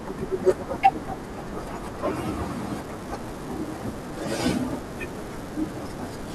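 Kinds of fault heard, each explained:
Unreliable data bit: from 2.74 s to the end, one marginal data line flips randomly, each error a spike about -30 dBFS, giving a steady crackle through pauses.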